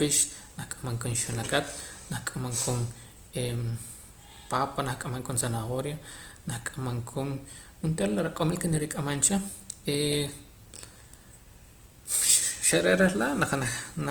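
Opus compression runs through the whole speech clip and is likely the cause of its plainly audible damage. The music-style CELT coding keeps each band's energy but, short of bits, fills bands with folded copies of lower ones or with noise, so the voice turns rough, grainy and noisy rather than swirly. Bandwidth stays full, reaching about 20.1 kHz, and the degree of damage fits a low bitrate of around 24 kbps.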